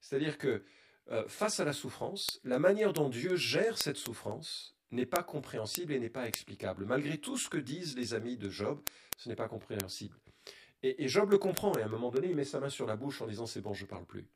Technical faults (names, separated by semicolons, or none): channel delay (comb filtering); word clock ticks